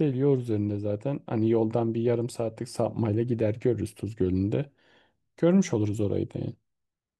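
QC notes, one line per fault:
No fault found, so there is no line per fault to give.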